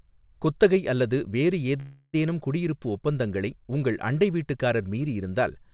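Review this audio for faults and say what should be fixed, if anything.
At 1.8 to 2.15 s, right after "குத்தகை அல்லது வேறு", there's a call audio freeze: about 330 ms of fading buzzy fill, ending in a 40 ms silence. The likely cause is late packets draining the jitter buffer. Speech resumes at "குடியிருப்பு ஒப்பந்தங்களை உங்கள் அண்டை" with nothing lost, just shifted later. A deeper adaptive jitter buffer, or fixing the network delay spikes, would prevent it.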